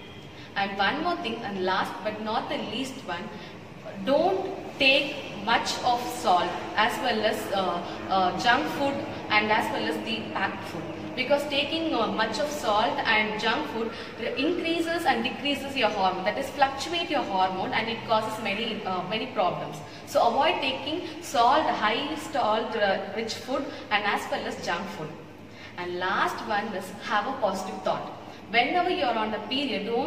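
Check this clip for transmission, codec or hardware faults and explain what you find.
No transmission, codec or hardware faults.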